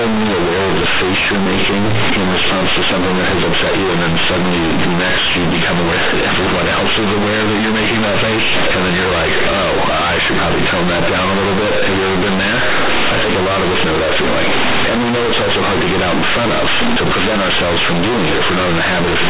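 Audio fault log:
Throughout, companded audio read as linear: the speech is extremely loud and harshly buzzy, with heavy noise in every pause. Mu-law bytes are played as plain linear 8-bit samples without expansion, so each sign change swings half the output range and quiet sounds become as large as loud ones.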